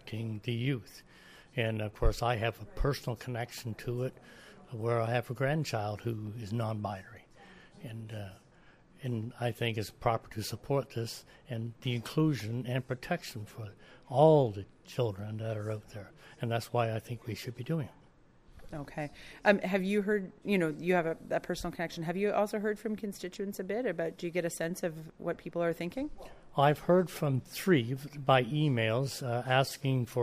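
No technical faults can be heard anywhere in this recording.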